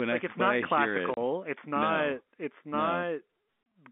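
At 1.14 s, right after "like I it's not", the speech drops out completely for 30 ms; the same short hole recurs at 3.63 s. Both gaps come from packet loss filled with silence: each time a single 30 ms packet of the telephone-band G.711 stream went missing, and the receiver played dead air in its place, leaving hard-edged holes.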